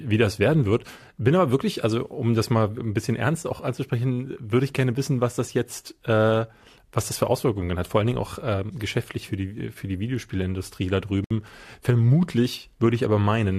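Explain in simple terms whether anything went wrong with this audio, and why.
The speech was encoded in separate pieces and joined without trimming the silent padding each piece carries at its edges. That leaves a gap at a join of encoded pieces: from 11.24 to 11.31 seconds, the sound drops out for about 62 milliseconds, then resumes where it stopped.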